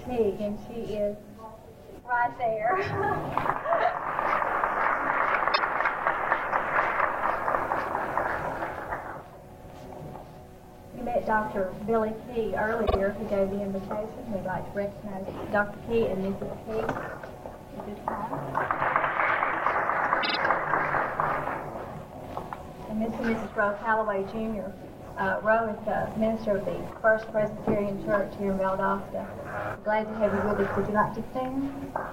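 Repeated frames occur at 5.53 s, 12.85 s and 20.22 s: short blocks of compressed audio replay, 72 ms once, then 48 ms twice, then 48 ms three times. Each stutter stretches the audio by 72, 96 and 144 ms.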